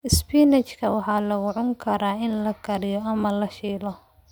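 No technical faults can be heard anywhere in the recording, so the speech signal reaches the listener intact.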